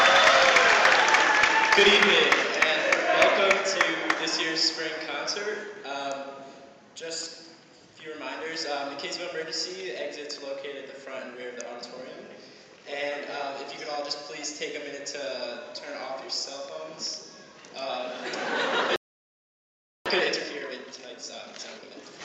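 At 18.96 s the sound cuts off for about 1.1 s, a playback stall, likely the player starving for data; the waveform shows a flat gap and the spectrogram a blank band. From 20.06 s to 22.14 s comes time-compressed catch-up: the audio runs at 1.5 times speed at normal pitch, and the spectrogram shows events packed closer together.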